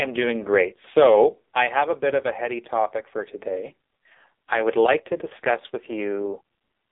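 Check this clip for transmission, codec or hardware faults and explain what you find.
One fault runs through the whole clip: AMR narrowband mobile codec. The speech is squeezed into a 300 Hz to 3.7 kHz line band, with nothing above 3.8 kHz. Heavy coding damage gives a buzzy, synthetic tone, which fits a low mode near 5.9 kbps.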